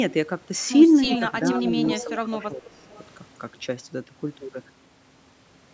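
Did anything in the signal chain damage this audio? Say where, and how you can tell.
Yes. Echo leak at 1.05–1.53, 1.82–2.05 and 2.69–3.04 s: a copy of the speech trailing by 347 ms, fading from about −5 to −30 dB. The fixed delay rules out room reverb. It is likely from a loudspeaker echo canceller in call processing.

Speech suppressed in double talk from 1.06–1.23 s and 1.42–2.86 s: the talker dips by roughly 10 to 15 dB while the echo overlaps. These are partial dips, not clean dropouts, which likely points to the canceller turning down both its own talker and the echo.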